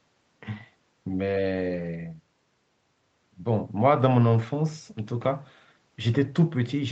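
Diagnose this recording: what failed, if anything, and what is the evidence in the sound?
Network stage, lost packets rebuilt from error correction: at 1.57–1.87 s, 3.99–4.05 s and 5.23–5.29 s the speech turns rougher and noisier with no gap. The decoder played low-bitrate Opus copies carried in later packets, rebuilding 160 ms, then 40 ms twice.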